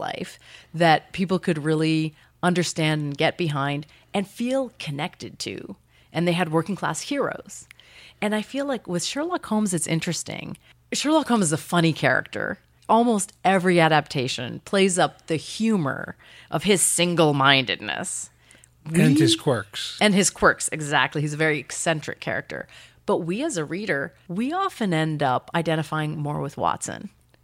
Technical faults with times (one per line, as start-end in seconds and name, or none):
none